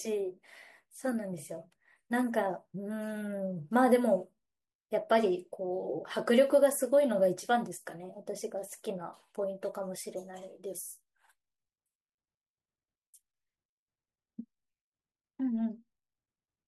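No audible technical faults anywhere in this speech recording.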